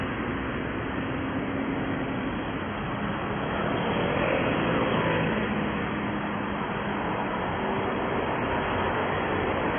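Everyday sound runs dull and smeared for the whole clip, with nothing above 3.4 kHz, likely from heavy AAC compression at a very low bitrate (about 16 kbps). The smeared, degraded texture distinguishes it from a clean low-pass filter.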